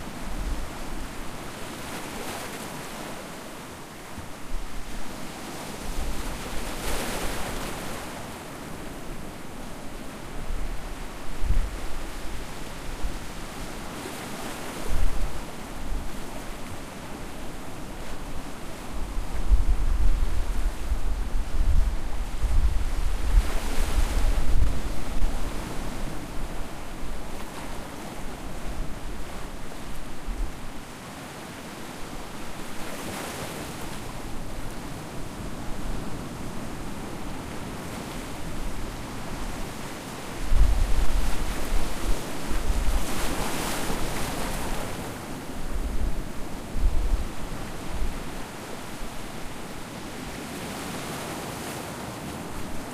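A processor working in 10-second chunks likely drops a sliver of roughly 20 ms at each handover. The result is audio missing between chunks, heard as abrupt skips at 18.01, 27.99 and 37.97 s, spaced evenly about ten seconds apart, where the sound jumps straight ahead.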